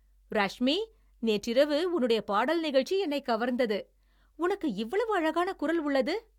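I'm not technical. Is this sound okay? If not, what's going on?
Yes, this sound is okay; there's nothing going on that needs fixing.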